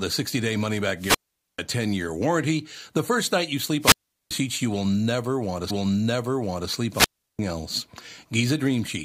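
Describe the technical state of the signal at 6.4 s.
At 6.4 s the signal is inside a stream segment repeat running from 5.70 to 6.70 s. Right after "will never want to", the player fetched or queued the same stretch of speech a second time, so about 1.0 s of programme plays again, starting with a small blip at the jump back. Unlike an echo or delay effect, nothing overlaps: the material is replayed whole and in sequence, adding time rather than layering sound.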